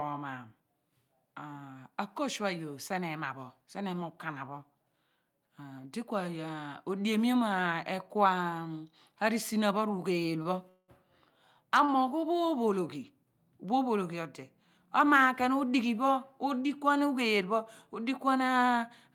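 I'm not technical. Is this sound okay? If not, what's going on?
No. At 10.43 s and again at 11.85 s the speech briefly hangs on one sound for a moment, with a slight buzz or dip. This is a short stall from a late packet. A piece of the call arrived late, so the receiver stretched the last sound for about 25 to 30 ms until it caught up.

From 10.69 to 10.90 s the speech freezes into a fading buzz or hiss, ending in a brief moment of silence, then carries on. This call audio freeze was likely caused by a longer hold-up in the connection, adding about 0.2 s of gap.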